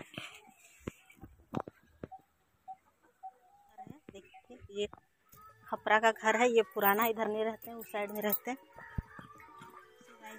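A single loud pop hits the audio from 8.98 to 9.01 s. It is one sharp burst, far louder than the sound around it, roughly 10 dB above it. The sound carries on underneath without a break. The likely cause is a sudden voltage step or pulse entering the signal path, from a plug, a switch, static or a driver glitch. The circuits after it shape that pulse into the brief crack.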